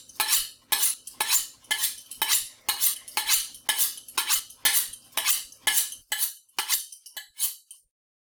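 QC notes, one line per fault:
0.94 s, 2.94 s and 4.40 s, dropped buffer (overrun): each point has the sound jumping abruptly forward, about 40 ms of material missing and the two sides butted together without any gap of silence. The likely cause is the recording software not reading its input in time, so the hardware overwrote a buffer's worth of samples before they were collected. The lost stretch makes the jump.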